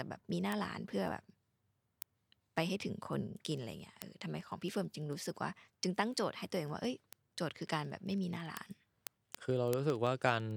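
A receiving device running on its own clock, unlocked from the sender and off by a few hundred ppm, slips one sample about every 0.05 s, producing word clock ticks throughout this speech clip from 0.14 to 10.57 s.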